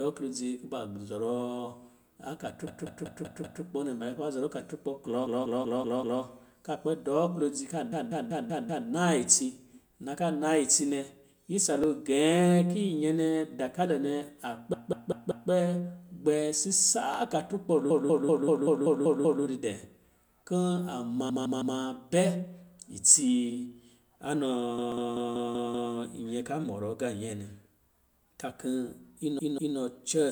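Speech is hit by repeated frames: a chunk of about 192 ms (160 ms at 21.29 s) plays again and again as a rhythmic stutter, at 2.67–3.63, 5.26–6.22 (after "kuba zɔrɔ akaturkpɔ klɔ", before "ka kpɛ dɔɔ wodzi"), 7.92–8.88, 14.73–15.50 (after "nɛ dakalo nɛ a"), 17.90–19.44, 21.29–21.77, 24.78–25.93 and 29.39–29.77 s. Each run lengthens the audio by up to about 1.5 s. Unlike a lone click, the same fragment audibly recurs. Dropped samples cause single sharp clicks at 11.84, 17.14 (just before "akaturkpɔ lo di dɛ") and 24.92 s. These are likely a roughly 0.7 ms gap where the waveform jumps ahead, so no sound is repeated or audibly lost.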